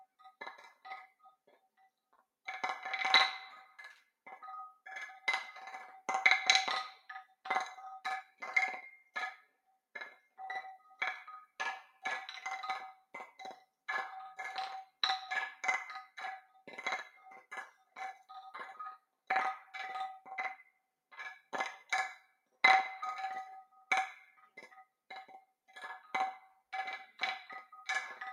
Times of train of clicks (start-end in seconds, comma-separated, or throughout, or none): none